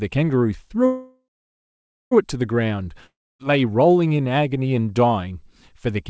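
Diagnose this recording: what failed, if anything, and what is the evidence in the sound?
A call audio freeze runs from 0.86 to 2.13 s, most likely at the network and jitter-buffer stage. The last speech sound carries on as a fading buzz, then drops to silence for roughly 0.9 s of the 1.25 s stretch. Speech then resumes exactly where it stopped, with nothing skipped. Delayed packets let the buffer run dry, and the receiver filled the wait, so the whole call now runs about 1.25 s later.

A long network dropout occurs from 3.06 to 3.51 s, with the same fading-buzz fill over about 0.33 s, including roughly 0.28 s of silence. Unlike the freeze, speech returns further on, with about 0.34 s of audio never played. This is likely packet loss in the network, not delay. The receiver concealed the hole and then skipped past the lost section. The fill sits within the G.722 call's bandwidth, which stops at 8 kHz.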